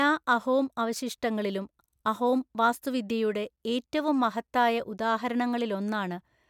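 No technical faults occur anywhere in the audio, so there is nothing to describe in time order.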